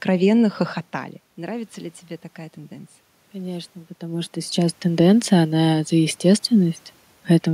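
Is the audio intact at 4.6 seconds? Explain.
No, at 4.6 s the sound is in the middle of an automatic gain rising, which runs from 2.68 to 5.18 s. After the input level dropped by about 13 dB, the gain control pushed its gain up by about 4 dB over those 2.5 seconds, so the voice and the room noise swell together. On a waveform the envelope widens steadily across that span, and a spectrogram shows the background floor brightening along with the voice.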